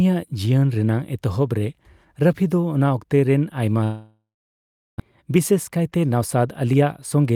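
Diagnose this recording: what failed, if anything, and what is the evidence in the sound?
Network: a long network dropout likely stalled delivery at 3.83 s. Concealment buzz fades into silence, and speech resumes at 5.02 s with 1 s missing.

Jitter buffer: a jitter buffer speed-up drains the built-up delay from 5.10 to 6.82 s by trimming pitch periods, so speech runs 8% fast at unchanged pitch.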